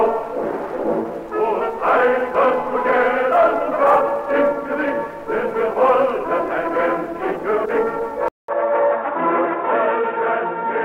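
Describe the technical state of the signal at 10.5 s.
At 10.5 s the signal sits inside a stretch from 8.28 s to the end where the input has likely switched to a poorer device. After a 200 ms gap at 8.28 s, the sound becomes dull and boxy because nothing above 3.8 kHz passes, with faint new background noise and no real change in level. On a spectrogram the upper bands go dark above a hard 3.8 kHz ceiling; the waveform shows a brief flat gap, then similar amplitude.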